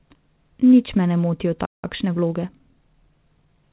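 At 1.65 s the speech cuts out mid-flow and stays silent until 1.85 s, a playback stall; the player likely ran out of data or had its thread blocked. From 1.85 s to 3.57 s the speech sounds hurried, about 1.1 times normal speed, with unchanged pitch. This is time-compressed catch-up, where the player trims small cross-faded pieces to clear its backlog. Throughout, the sound has nothing above 4 kHz, which fits a call path using G.711 mu-law.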